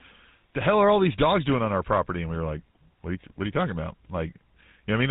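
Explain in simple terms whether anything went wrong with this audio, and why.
Yes, the whole recording, from start to finish, went through the GSM full-rate codec, an early mobile-phone format. It rebuilds speech from a rough model driven by regular pulses, which gives the voice a plainly audible buzzy, gravelly texture, and it drops everything above 4 kHz, so the sound is dull.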